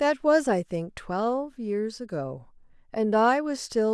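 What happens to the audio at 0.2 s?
Nothing goes wrong at 0.2 s; the audio plays through that moment intact, with no dropout, click, distortion or other fault.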